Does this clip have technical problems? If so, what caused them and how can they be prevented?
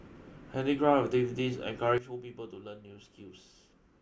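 Yes. At 1.98 s there is a sudden gain jump: the speech and its background noise drop together by about 12 dB in a single step and stay there to the end, likely from a gain setting applied without a ramp. Ramping gain changes over several milliseconds prevents this.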